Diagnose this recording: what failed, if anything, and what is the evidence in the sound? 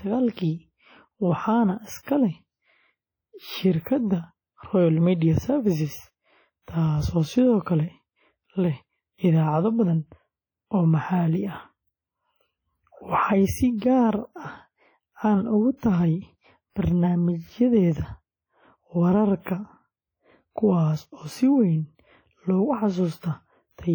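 The damage sits at the codec stage. The whole recording has a ringing, washy texture, with a hiss that swells and shrinks along with the speech, and weaker detail seems to drop out entirely. That points to heavy transform coding, likely WMA compression at a low bitrate, something around 32 kbps. Long transform blocks smear the quantisation noise over tens of milliseconds, and the starved bit budget zeroes out the quieter spectral lines.

Pre-echo comes from the same codec stage. At 0.33, 2.03, 6.62 (just before "taasoo sidoo"), 13.77 and 15.77 s, a short hiss creeps in ahead of sharp onsets, and the attacks land soft and smeared. Those smears run from 40 to 57 ms. The noise budget is set by the loud part of each block and gets spread evenly across all of it, so it also fills the quiet gap before a late transient.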